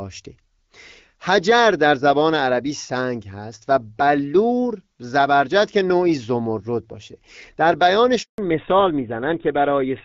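At 8.22 s the speech cuts to silence for 160 ms until 8.38 s. This is a handover gap: no speech frames arrived while the call moved between networks.

From 8.38 s to the end the speech sounds duller and rougher, with nothing above 4 kHz. This is a fallback to narrowband. The sound fits a drop from HD Voice, which before the switch sounds like AMR-WB at around 12.65 kbit/s with light codec damage, to a GSM full-rate codec.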